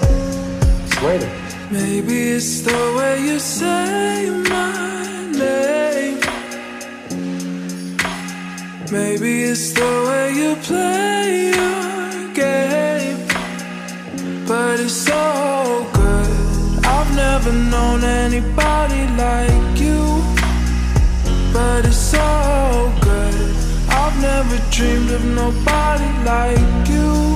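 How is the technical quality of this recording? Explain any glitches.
No technical faults can be heard anywhere in the recording, so there are no glitches to explain.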